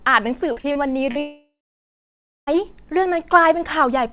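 Speech heard through a narrowband call path with nothing above 4 kHz. From 0.52 to 1.18 s, repeated packet loss (robotic sound) chops it with four short holes, the longest 42 ms, each patched by extending the previous sound. From 1.19 to 2.50 s the sound smears into a fading buzz and then about 0.96 s of silence, a likely long network dropout with that audio lost.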